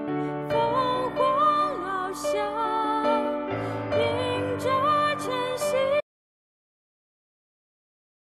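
At 6.01 s the audio cuts out abruptly and never returns. This is an audio dropout to silence. The sound stops mid-flow, and the remaining 2.2 s hold silence. No room tone or faint hiss survives, so the gap is dead rather than quiet. Whatever followed that point is lost. The likely cause is a lost input, such as a disconnected device, a failed link or an accidental mute, while the recorder kept writing silence.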